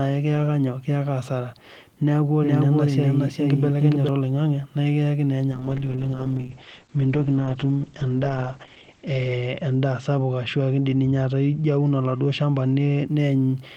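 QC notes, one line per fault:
2.43–4.09 s, doubled audio track: a second, full-band copy of the speech runs underneath the first, trailing by roughly 0.4 s at about the same loudness, so every syllable is heard twice with no reverberant tail or room colouring on the repeat. The copy appears and vanishes abruptly at the ends of this span. That clean, fixed-offset repeat most likely comes from the audio being picked up a second time through a slower route, or from an edit that left two out-of-step copies layered together.
5.53–13.13 s, call bitrate drop: the encoder's bitrate falls from 32 kbps to 9 kbps, staying at its lowest for about 3.5 s before climbing back. With so few bits the codec quantises the speech coarsely, which gives it a rough, watery texture, and it also discards the top of the spectrum, pulling the bandwidth down from 20 kHz to 8 kHz. The speech therefore sounds dull and muffled, losing crispness in sibilants, until the bitrate recovers near the end.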